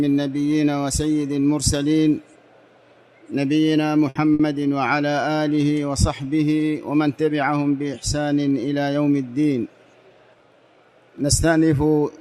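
At 4.09 s a burst of packet loss cuts in and lasts to 4.18 s, and a second one follows from 4.33 to 4.42 s. Each time, around 60 ms of audio never arrived, so the receiver stretched the last sound it had into a held buzz or hiss that fades away. The sound then resumes farther along, with about 60 ms gone. Unlike a plain dropout, the gap is bridged by a decaying imitation of the preceding sound rather than by silence.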